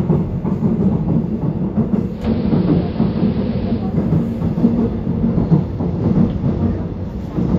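From 2.06 to 3.97 s the sound dulls, gains faint hiss and shifts about 2 dB: digital radio blending to AM analogue.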